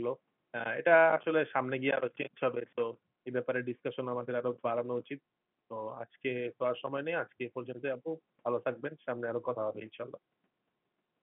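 No technical faults can be heard anywhere in the speech. The sound carries the narrow band of an ordinary G.711 telephone line, roughly 150 Hz to 3.4 kHz with nothing above about 3.8 kHz, which fits 64 kbps mu-law coding.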